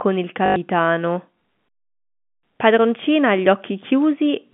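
From 0.46 to 0.56 s, packet loss with the last packet repeated leaves a 100 ms hole in the speech, filled by replaying one fragment. That points to five 20 ms packets. Together the repeats form a 50 Hz robotic buzz, not the silence of a plain dropout. The G.711 telephone band around it is audible but clean.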